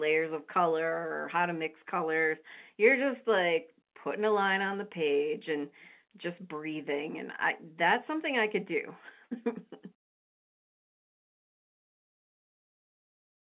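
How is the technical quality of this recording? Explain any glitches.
No glitches are audible.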